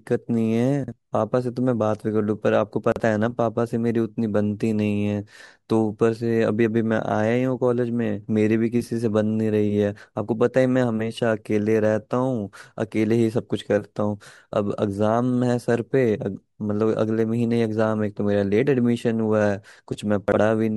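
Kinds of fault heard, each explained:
Chunks out of order: A 40 ms chunk of the speech plays one chunk late, after the chunk meant to follow it. Nothing is lost. Each swap sounds like a brief jumbled stutter, at 0.84, 2.92 and 20.28 s.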